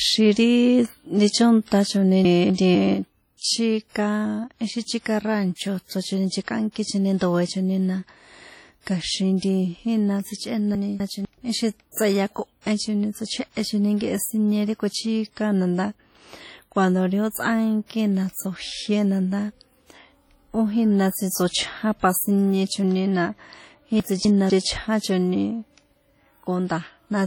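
Speech throughout carries heavy codec damage: a ringing, washy quality with hiss that swells and fades with the voice, and on a spectrogram the weaker detail between strong bands appears patchy or blanked, with nothing above about 19.8 kHz. That is the signature of WMA compression, and it sounds most likely like an early WMA encoder at a low rate, which fits a 32 kbps bitrate, whose long transform blocks smear quantisation noise over tens of milliseconds and drop quiet components entirely. Three moments have chunks out of order, at 2.25 to 2.75 s, 10.75 to 11.25 s and 24.0 to 24.5 s. In each, two 250 ms slices of audio play in swapped order, with the earlier slice arriving one position late. Nothing is missing, but the passage sounds jumbled for that half second. In the waveform and spectrogram, each one shows abrupt vertical breaks where the envelope and harmonics fail to line up at the joins. 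Pre-echo appears before sharp onsets at 3.37 s (46 ms), 7.17 s just after "chíka ráncho chrochoni nchekꞌánkichoni" (38 ms), 9.37 s (54 ms) and 11.92 s (56 ms). Because the codec spreads noise sized for the loud attack across its whole block, a short hiss fills the quiet gap ahead of each attack, and the attack itself sounds softened. On a spectrogram this shows as a broadband smear leading into each onset.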